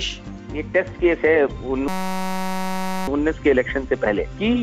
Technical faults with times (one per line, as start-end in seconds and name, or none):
1.88-3.08 system hang loop